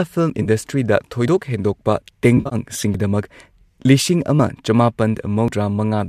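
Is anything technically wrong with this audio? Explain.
Yes. The clip is speech, and it has two kinds of fault.

Dropped buffer (overrun) occurs at 0.30, 1.28, 2.94, 4.40 and 5.48 s. Each is a sudden jump forward in the speech. There is no gap of silence. The likely cause is the program failing to collect its samples before the hardware overwrote them. The lost piece is simply cut out and the two sides are butted together. About 20 ms goes missing at 0.30 and 4.40 s, and about 40 ms at the other three points.

AAC frame loss with concealment occurs from 0.42 to 0.48 s and from 2.37 to 2.55 s. Here the decoder lost data and rebuilt it from the last good spectrum. The first event covers 30 ms, which fits three 10 ms frames. It sounds like a brief smeared, noisy patch. The second loses 110 ms scattered across about 140 ms, with the longest run around 50 ms. It gives a longer stretch of phasey, washed texture. 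The low-delay AAC coding that likely sits underneath leaves only a slight graininess.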